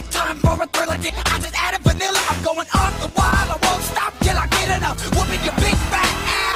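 At 1.09 to 1.11 s there is a skip ahead. Roughly a second of audio was discarded, either lost on the way or thrown out by an overflowing jitter buffer while later audio was already queued, so playback latency dropped by about a second in one step. Nothing fills the gap. The sound before the cut is spliced almost directly onto material from about a second later, so the flow lurches forward abruptly with that whole stretch simply missing.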